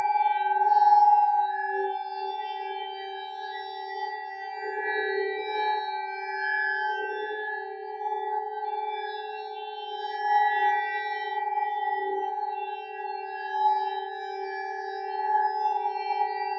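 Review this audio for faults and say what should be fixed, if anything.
A noise suppressor applied to music or sounds is active throughout. It is built for speech, so it treats steady tones, ambience and reverb as noise. Sharp onsets pass through. Held sounds and decaying tails get pushed down by roughly 10 dB. The level pumps and flutters as the suppressor keeps opening and closing. The space between events thins out. The call's microphone processing is not at fault, and its 8 kHz upper limit is expected. To prevent this, disable noise suppression or switch to a music mode when sending non-speech audio.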